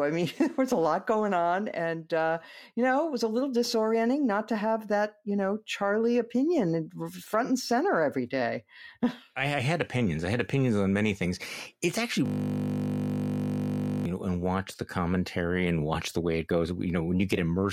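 At 12.26 s the audio collapses into a steady buzz pitched at 50 Hz that holds until 14.05 s, when it releases into "you know and watch". This is a system hang loop: the computer or its audio driver stalled while the playback hardware kept cycling through one 20 ms piece of its ring buffer, repeating it about 90 times. Because the looped segment is so short, the repetitions fuse into a tone at the loop rate instead of a stutter.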